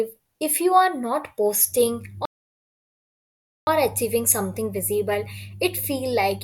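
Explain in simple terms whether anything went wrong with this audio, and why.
A rebuffering stall stops the speech at 2.25 s; the player ran short of downloaded audio, waited 1.4 s, then resumed exactly where it stopped, on "achieving something visible".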